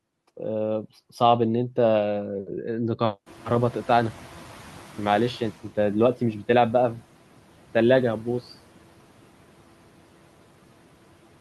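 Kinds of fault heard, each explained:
Noise suppressor catching up: the room noise in this speech jumps by about 23 dB at around three and a half seconds, and the suppressor's noise estimate has not yet tracked the new level, so the louder noise passes through with less reduction from 3.26 s. Over about 2.4 s the estimate adapts and the noise sinks by about 10 dB, settling by 5.66 s to sit roughly 21 dB below the speech.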